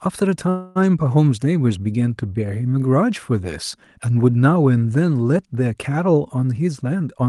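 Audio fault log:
0.49–0.77 s, call audio freeze: the sound stalls and the last bit is stretched into a fading buzz for about 261 ms, then picks up exactly where it left off. That's likely delayed packets draining the jitter buffer, so nothing's lost, just pushed back.
6.47–7.26 s, jitter buffer speed-up: the last stretch runs about 111% fast with pitch unchanged, so it sounds a bit rushed. The receiver is snipping out tiny pitch-period slices, roughly a tenth of a second in total, to trim excess buffered delay.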